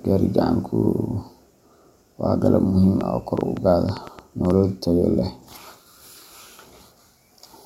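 From 3.01 to 4.51 s, just before "tayo leh", a train of clicks ticks over the speech, about six a second, unevenly spaced, likely interference pulses.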